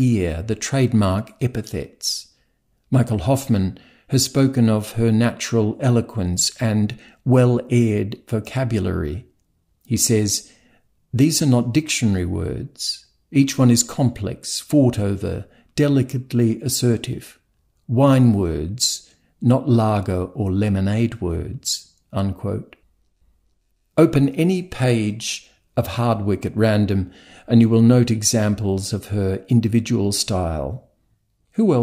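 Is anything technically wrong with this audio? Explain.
No, nothing technically wrong is audible anywhere in this speech recording.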